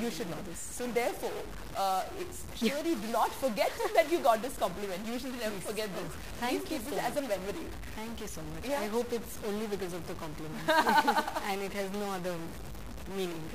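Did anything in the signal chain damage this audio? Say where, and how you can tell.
Yes, and it runs the whole way through. About half the values seem nudged by a fixed step of about -40 dBFS, and even the pauses fill with noise. That's likely a stuck bit at the converter or its data lines, one bit held at a fixed value regardless of the waveform.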